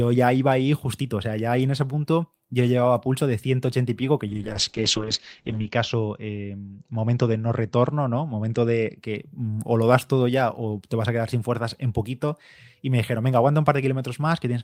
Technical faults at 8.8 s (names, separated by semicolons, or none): call bitrate drop